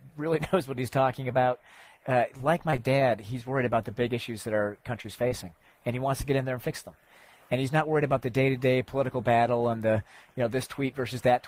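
From 2.37 to 2.80 s the audio turns choppy, with small pieces dropping out and a robotic quality as holes follow one another closely. This is repeated packet loss: four separate gaps in under half a second, the longest about 22 ms, which fits 20 ms packets. Each gap was patched by extending the sound just before it. Together these patches make up 65 ms, roughly 15% of the stretch.

At 5.02 to 5.06 s and again at 5.28 to 5.33 s, there is a brief smear or wobble, each lasting about 23 to 24 ms. Each is a short concealed packet loss: one packet's worth of audio, about 20 ms, arrived too late or not at all. The receiver carried the preceding sound forward to fill the hole, following its pitch or as shaped noise depending on the material, then blended back into the actual signal.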